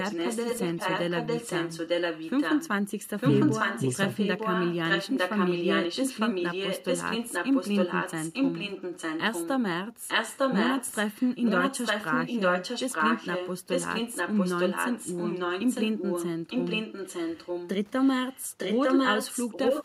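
In this speech clip, an echo canceller on a loudspeaker end likely failed to remove what its microphone picked up. The result is echo leak: a copy of the voice trails about 0.9 s behind. It is roughly as loud as the speech or a little quieter at 0–2.7, 3.17–9.54, 10.07–13.5, 13.7–16.27, 16.49–17.7 and 18.28–19.84 s, and faint at 18.04–18.09 s.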